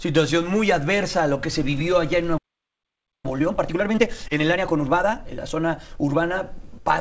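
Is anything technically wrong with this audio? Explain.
Yes, there are three faults, heard over a call path whose G.722 coding removes everything above 8 kHz.

A playback stall runs from 2.37 to 3.26 s, about 0.86 s of dead silence in mid-flow. The player likely ran dry of buffered data or had its output thread blocked, and the sound resumes only once it recovers.

A time-compressed catch-up follows from 3.26 to 6.25 s. The player works off its accumulated backlog by cutting out short segments and cross-fading the joins, so the sound runs about 1.25 times faster at unchanged pitch.

Short concealed packet loss occurs at 4.28 to 4.31 s, inside the catch-up. About 20 ms of the stream arrived too late for the decoder. The receiver bridged the gap by extending the preceding sound, then blended back, leaving a brief smear or wobble.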